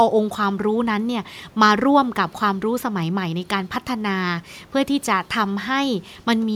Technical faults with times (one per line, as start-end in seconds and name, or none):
none